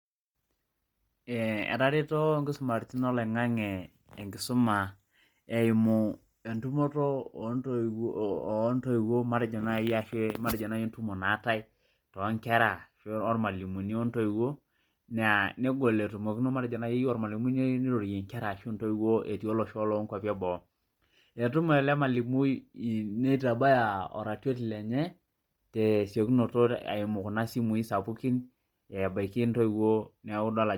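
Heavy transform coding, likely Bluetooth LC3 compression, runs through the whole of this speech recording. The codec appears to be working at a low rate, with damage consistent with about 32 kbps and a block rhythm that fits 10 ms frames. At that rate, much of the upper spectrum is discarded and replaced with shaped noise. The voice takes on a breathy, grainy edge throughout, even though the band itself still reaches about 20.1 kHz.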